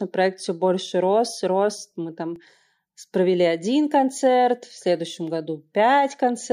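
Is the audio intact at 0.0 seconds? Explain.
Yes, the audio is intact at 0.0 seconds, with no fault present at that moment.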